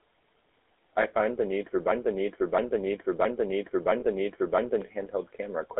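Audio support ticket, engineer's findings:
GSM full-rate codec throughout: buzzy, gravelly voice, band limited to roughly 300 Hz to 3.6 kHz. Coarse pulse-train excitation, consistent with 13 kbps GSM full-rate coding. Damage plainly audible.

Lost GSM frames, 4.0 to 4.03 s, just before "the need for": brief rough metallic ring. Decoder repeating last good frame's parameters, fitting a single 20 ms frame loss.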